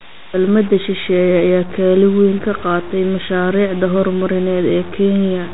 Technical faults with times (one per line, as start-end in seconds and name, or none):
0.00-5.54 low bit depth without dither
0.00-5.54 4-bit ADPCM compression